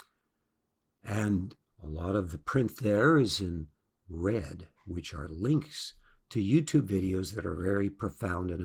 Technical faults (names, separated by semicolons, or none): Opus voice compression